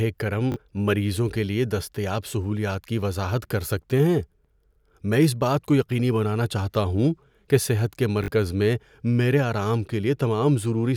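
Short clicky stutters at 0.52–0.56 s and 8.24–8.28 s are repeated buffers. Audio arrived late, so a chunk fitting a 20 ms buffer replayed twice, losing roughly 40 ms.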